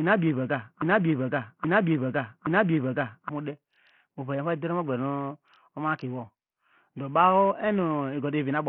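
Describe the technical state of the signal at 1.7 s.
At 1.7 s the speech sits inside a broken-record loop running from the start of the clip to 3.29 s. The playback or stream has likely stalled and keeps resending the last fragment it held, so a 0.82 s piece of speech, already repeating when the clip begins, plays back to back three times with identical timing and content. Whatever should have been heard across those 3.3 seconds is missing, replaced by the same stuttering chunk.

The same moment also carries heavy Bluetooth SBC compression, present throughout. The link is likely running the SBC codec with a starved bit budget, which fits a rate near 48 kbps. The upper sub-bands get almost no bits while the lower ones are coarsely quantised. The treble thins out and flickers in and out, and a gritty, aliased roughness clings to the speech, including each repeat of the looped fragment.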